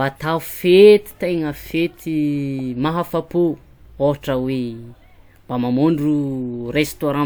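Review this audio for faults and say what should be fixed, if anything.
No technical faults can be heard anywhere in the speech. Nothing here needs fixing.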